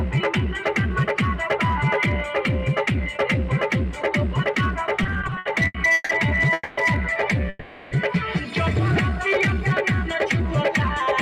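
From 5.03 to 6.11 s, packets arrived late again and again, so the jitter buffer kept running dry: twelve short stalls in a row, the longest 150 ms. About 380 ms of that span is filled by stretched continuations of the last sound. This repeated stalls (stutter) makes the audio drag and hiccup, but nothing is lost.

Two call audio freezes follow, at 6.53 to 6.79 s and 7.49 to 7.93 s, likely caused by packets held up in transit that emptied the buffer. In the first, about 240 ms of fading continuation ends in a brief near-silence of about 10 ms. In the second, the continuation runs about 420 ms. Each time the sound resumes where it stopped, so a gap is inserted rather than anything missing.

From 9.10 to 9.97 s, a jitter buffer slow-down rebuilds its reserve by repeating single pitch periods and bits of pauses, adding about 55 ms. The audio plays at roughly 95% speed at unchanged pitch, sounding slightly drawn out.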